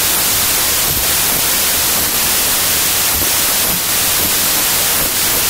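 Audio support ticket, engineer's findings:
Wrong sample width, whole clip. Loud broadband noise with the speech buried underneath, slowed to 0.75x speed and pitched down to match. Fits 32-bit integer data read as packed 24-bit: samples straddle byte boundaries, most values are built from mismatched bytes, and only partial top bits of the real signal survive. Likely component: decoder or file-format header mismatch.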